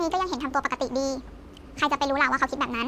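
Speech that sounds high and hurried throughout the clip, running about 1.45 times too fast and pitched up by about 6.45 semitones. This is a wrong sample rate fault: the audio is played faster than it was recorded, with no conversion, which fits audio recorded at 22 kHz being played back at 32 kHz.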